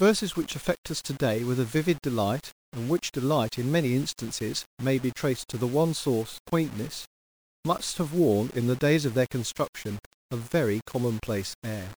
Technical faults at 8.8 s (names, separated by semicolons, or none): low bit depth without dither